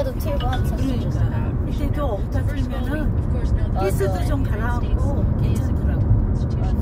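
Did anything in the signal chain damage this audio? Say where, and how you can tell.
Yes. At 1.66 s the audio jumps abruptly ahead with a brief blip at the join, and the material either side of the cut doesn't run on naturally. This points to the network and playback stage, likely a stream segment skipped. One segment of the segmented stream failed to arrive or load, and the player moved on to the next one. The missing stretch of programme is simply gone, and the splice leaves that short blip as the audible seam.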